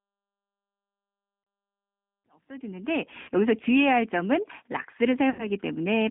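The clip is speech carried through a G.729 codec. The band runs from about 200 Hz to 3.5 kHz, and the coarse pulse-based rebuild gives a plainly rough, synthetic edge, which fits an 8 kbit/s G.729A link. There is VoIP packet loss concealed by the speech codec at 1.44 to 1.47 s, 3.22 to 3.29 s and 5.30 to 5.47 s. Each gap smears into a fading buzzy tone or coloured noise. The losses of 30, 60 and 90 ms fit one, two and three packets. The sound stays weak briefly afterwards. The second gap falls inside a smooth fade-in that runs from around 2 s to 3.37 s.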